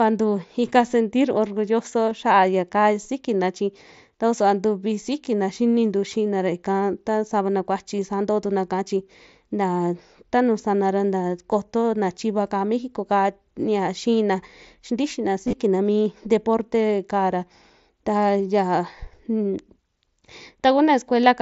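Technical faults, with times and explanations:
2.10 s, 7.98 s and 15.47–15.53 s, concealed Bluetooth headset packet loss: the first two, just after "ta savana kuachi" for the second, are near-invisible 15 ms blips. The third spreads 45 ms of gaps over 60 ms, and its longest 22.5 ms run gives a brief buzzy held tone and a slight warble as speech resumes. The receiver patched missing packets by repeating the best-matching stretch of recent waveform.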